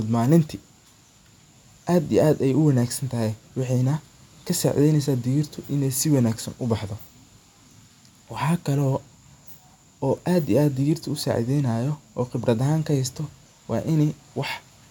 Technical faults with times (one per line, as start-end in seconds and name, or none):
none